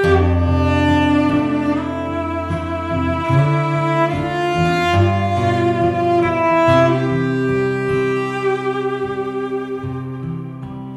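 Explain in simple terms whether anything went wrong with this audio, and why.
Nothing went wrong here: no faults were found anywhere in the recording.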